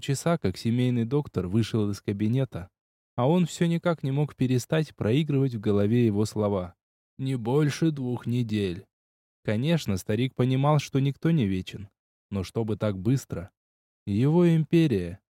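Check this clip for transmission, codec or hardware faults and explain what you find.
No transmission, codec or hardware faults can be heard anywhere in the clip, and the signal stays technically intact throughout.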